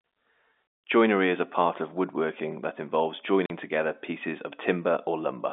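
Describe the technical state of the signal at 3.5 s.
At 3.46 to 3.50 s the speech drops out for 40 ms. This is packet loss filled with silence. After "of woodworking that involves", two missing packets of 20 ms each were replaced by silence. Hard edges bound the gap before "together pieces" resumes over the narrowband G.711 telephone line.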